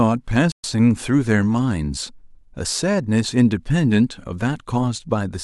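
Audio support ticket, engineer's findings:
Playback stall, 0.52–0.64 s: speech cuts to silence for 120 ms, then resumes. Likely player buffer underrun or blocked audio thread starving the output.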